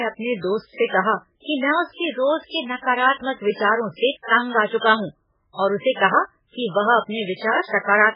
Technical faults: MP3 compression

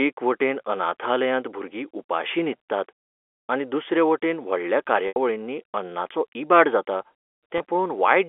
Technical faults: packet loss with pitch repetition

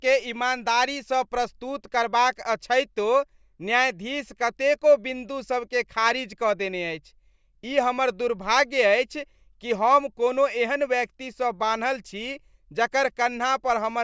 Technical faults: none

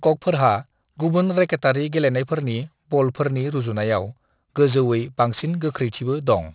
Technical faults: aliasing

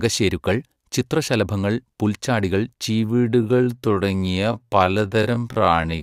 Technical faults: time-stretched section

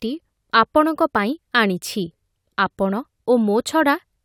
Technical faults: none

